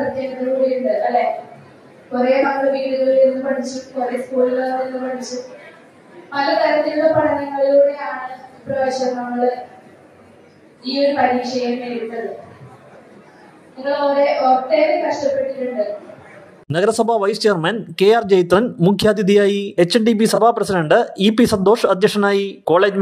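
At 1.29 s a very brief stray sound flashes past, misplaced energy peaking at around -25 dB relative to full scale, heard as a short chirp, squeak, blip or burst of noise. This is a corrupt frame decoded: bits inside a compressed frame were flipped, yet the decoder played it, so misread gains or codes put energy at the wrong frequencies. The damage fits a couple of frames.

From 2.42 to 2.50 s the sound briefly drops out or smears, and a shorter gap or smear follows from 20.35 to 20.38 s. Both are a corrupt frame concealed: the decoder detected the damaged AAC data and covered it, either by muting or by substituting a sign-scrambled copy of the last good spectrum. The first gap fits about five damaged frames, and the second fits a single frame.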